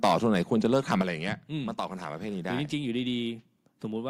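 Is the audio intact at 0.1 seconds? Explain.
No, at 0.1 s you're inside a burst of microphone overload running from 0.03 to 0.16 s. The input was likely driven about 6 dB past what the converter could take, so the peak tops get sheared off, a few percent of samples, giving the speech a crackly, gritty edge.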